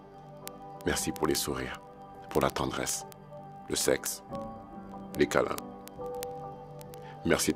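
From 0.1 s to 7.54 s, word clock ticks sound roughly every 20 ms. The receiver's clock isn't locked to the sender's, so each slip drops or repeats one sample, which points to clocks about 1000 ppm apart. Their steady rhythm distinguishes them from random crackle.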